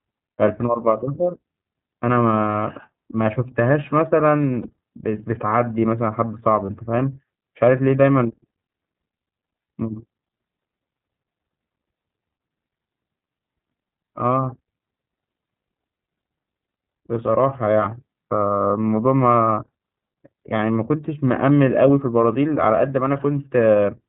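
Speech coded with the iLBC codec throughout, audibly rough and slightly synthetic, with a spectrogram showing nothing above 4 kHz, consistent with a 13.33 kbps mode using 30 ms frames. Lost iLBC frames at 2.52, 4.62 and 6.66 s each leave a 30 ms buzzy held vowel, visible as repeated, smeared pitch striations before normal speech immediately resumes.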